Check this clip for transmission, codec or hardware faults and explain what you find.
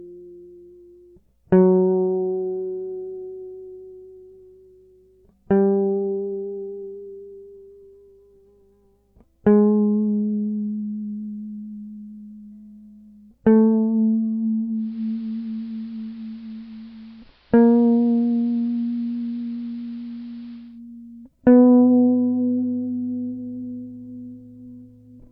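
There's one fault here: digital radio blending to analogue, from 14.73 s to 20.81 s in this music clip. The receiver lost its digital signal and cross-faded over roughly 275 ms to the station's AM broadcast, then returned to digital at 20.81 s. AM's narrow bandwidth leaves the music duller through that stretch, and a hiss comes up, sitting around 35 dB below the music. The loudness stays matched across both blends, so you hear a change in tone and noise rather than a volume jump.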